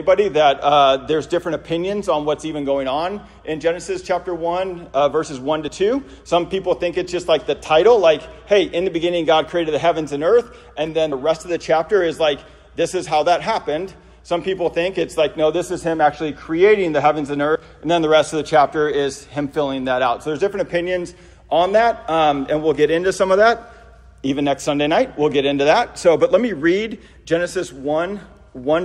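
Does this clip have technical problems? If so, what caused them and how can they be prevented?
Yes. Compressed frames are skipped at 5.68 s, 11.12 s and 17.55 s. The sound jumps forward by about one, two and three 32 ms frames, dropping roughly 30, 70 and 100 ms. The frames were missing or rejected as damaged. Prevent this by checking file integrity after transfer and re-encoding from an intact source.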